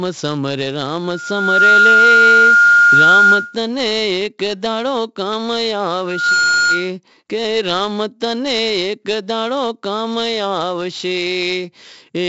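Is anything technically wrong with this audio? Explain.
Yes, two faults.

4-bit ADPCM compression runs through the whole clip. Each sample is coded as a coarse 4-bit step from a predicted value, so quantisation error rides along with the signal's level. The damage is heavy: every loud syllable carries a gritty hiss, and sharp onsets smear where the step size lags behind. Nothing sounds above 7.8 kHz, which fits a 64 kbps stream sampled at 16 kHz, leaving the speech dull as well as rough.

A loudspeaker feedback squeal appears from 1.04 to 3.57 s and again from 6.06 to 6.90 s. The microphone is picking up the loudspeaker it drives, and at 1.4 kHz the loop gain climbs past one, so that tone feeds on itself. In the first event it swells over about three-quarters of a second to roughly 10 dB above the speech. The second builds faster, in about a third of a second, and peaks nearer 5 dB above it.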